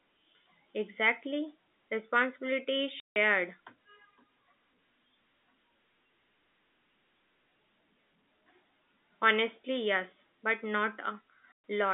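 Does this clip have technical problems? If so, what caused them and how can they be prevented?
Yes. There is packet loss filled with silence, at 3.00 to 3.16 s (160 ms) and at 11.52 to 11.56 s. Lost packets were replaced with dead silence, so the speech is cut by holes with hard edges. The lengths point to 20 ms packets. Concealment would repeat or smear the last sound, and the G.711 telephone coding's 200 Hz to 3.6 kHz band only dulls the tone, but here the audio drops out entirely. Enabling packet loss concealment and a larger jitter buffer, or adding redundancy or FEC on the network link, would prevent it.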